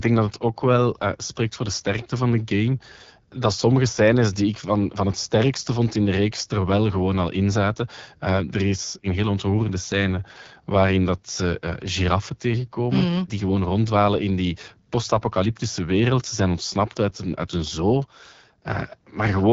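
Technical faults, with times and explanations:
Throughout, AMR wideband (HD Voice) codec: the speech has a rough, raspy texture, and the plainly audible damage points to one of the lowest AMR-WB modes, such as 8.85 kbit/s. The codec rebuilds speech from a vocal-tract model driven by sparse pulses and fills the top band with shaped noise. That is why nothing is heard above about 7.5 kHz, far higher than the 3.4 kHz ceiling of narrowband phone audio, yet the voice still sounds gritty.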